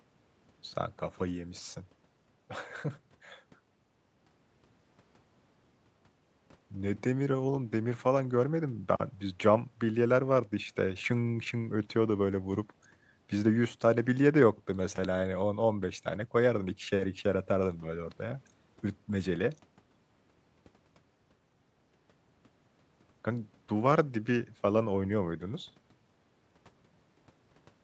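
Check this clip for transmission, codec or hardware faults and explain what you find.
No transmission, codec or hardware faults turn up anywhere in this speech clip.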